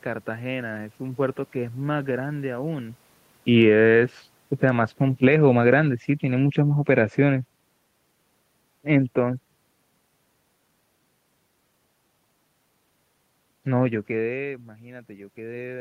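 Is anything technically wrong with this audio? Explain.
Yes, there's automatic gain falling twice: 3.44 to 3.87 s, dropping about 4 dB, then 4.48 to 7.54 s, about 6 dB more. The gain control decided the input was too hot or its background noise too strong and pulled the level down, so the speech and room noise sink together.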